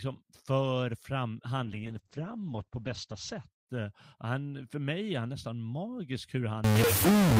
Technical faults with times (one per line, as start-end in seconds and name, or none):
1.64-4.25 call bitrate drop
6.64-7.40 stuck bit